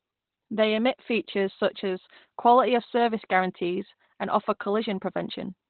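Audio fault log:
throughout, Opus compression: muffled, hoarse speech with nothing above 4.3 kHz, likely the encoder in narrowband SILK mode, which fits roughly 12 kbps.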